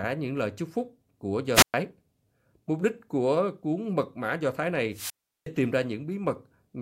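Wireless microphone squelch dropouts interrupt this speech clip twice, first from 1.54 to 1.74 s, right after "lời chúc phúc của", and again from 4.91 to 5.47 s, just before "tìm ra". In each case the analogue FM radio link weakens until the receiver's squelch gates the output, leaving a hole of near silence of about 118 ms in the first and about 365 ms in the second before the voice comes back.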